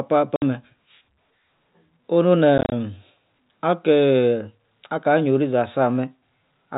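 At 0.36 s, 60 ms of packet loss filled with silence cuts a hole. From 2.58 to 2.72 s, gaps of up to 30 ms chop the speech. The gaps suggest 10 ms packets. The band stops at telephone G.711's 4 kHz limit.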